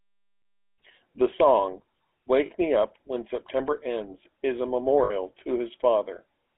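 GSM full-rate codec coloration runs through the whole speech clip, with a buzzy, gravelly roughness consistent with a 13 kbps full-rate coder. The codec rebuilds the voice from a vocal-tract filter driven by sparse, regularly spaced pulses. The line band sits between roughly 250 Hz and 3.5 kHz, so the audio sounds thin and boxy.

Lost GSM frames cause brief metallic rings at 0.40 to 0.46 s, 2.46 to 2.51 s, and 5.04 to 5.12 s, lasting 60, 40 and 60 ms. Each gap was filled by repeating the last good frame, which fits two or three missing frames.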